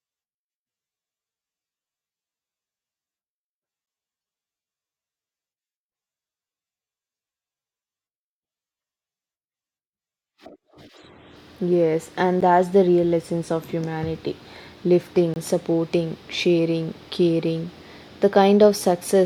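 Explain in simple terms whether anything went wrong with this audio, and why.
Three brief glitches interrupt the speech: tiny ticks at 3.86 s and at 12.41 s just before "that's the real essence", and a slightly longer hole from 15.34 to 15.36 s before "supporting sharing caring". Each is a block of digital silence, where a short stretch of sound was swapped for silence with abrupt edges. This most likely happened because the program fell behind in filling its output buffer.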